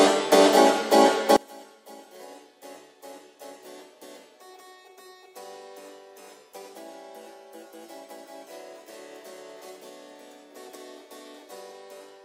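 From 1.36 s to the end, the centred content collapses by about 28 dB when heard in mono, leaving only a faint residue. The likely cause is one channel inverted in polarity, so material common to left and right cancels on summing.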